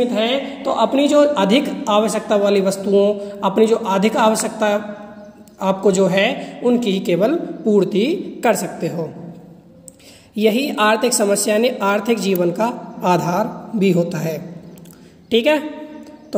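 Sharp snaps at 4.40 s (peaking around -10 dBFS) and 12.36 s (near full scale): electrical switching spikes, likely a nearby switch arcing into the audio line.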